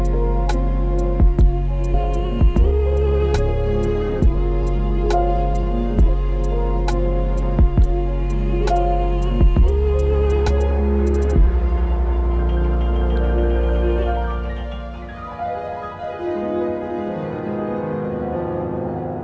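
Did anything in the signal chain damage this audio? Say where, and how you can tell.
Yes. The network and jitter buffer stage damaged it. At 1.94 to 1.96 s the sound jumps forward with no gap filled. Roughly 0.7 s of audio is missing. This is a skip ahead: the buffer discarded a stretch while later audio was already queued, then joined both sides directly.

Right after, from 2.04 to 5.63 s, the sound runs at 105% speed with unchanged pitch. It feels hurried. This is a jitter buffer speed-up. The buffer held excess audio and trimmed short pitch-period pieces repeatedly, removing around 150 ms in total. The band stops at 8 kHz, which fits a G.722 call path.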